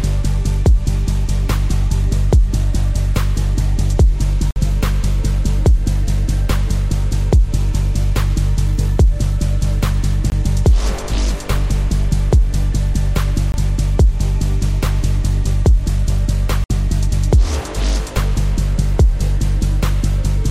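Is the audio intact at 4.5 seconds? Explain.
No. At 4.51 s the sound drops into a block of digital silence lasting about 53 ms, until 4.56 s. A run of samples became zeros, likely because the output buffer was not filled in time. The hard cuts leave a short hole.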